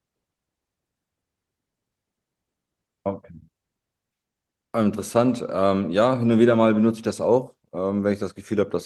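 Nothing's amiss in this bit of speech; it's a recording carried over Opus voice compression at a modest rate, and no technical fault turns up anywhere in it.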